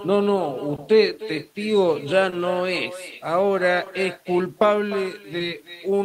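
From the start, the speech carries echo with no canceller. A loudspeaker at the far end feeds the microphone there, and nothing strips it out. The talker's own speech returns after the network round trip, around 300 ms later. The copy sits about 15 dB below the direct sound. It is quieter and thinner. Each phrase trails a faint shadow of itself, roughly a third of a second behind.

Clock drift between sender and receiver also runs through the whole clip. The sender's clock is slow, by something like one and a half percent. The receiver's jitter buffer keeps draining as a result. To cope, the receiver stretches or repeats small pieces of audio. The sound picks up small timing hiccups. They recur unevenly across the clip and make the pacing feel slightly uneven.

Short stalls from a late packet fall at 0.76, 2.30, 3.84 and 5.38 s. Each lasts about 40 ms. Each time, a packet arrived late and the buffer was empty. 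The receiver held the last sound for about 20 ms until the data came. Playback then resumed from the same point, and nothing is lost. Each stall adds about 20 ms of delay. It is heard as a brief held tone with a slight buzz or dip.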